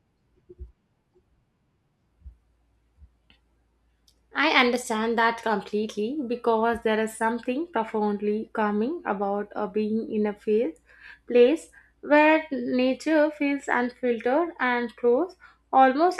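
No technical faults can be heard anywhere in the speech recording.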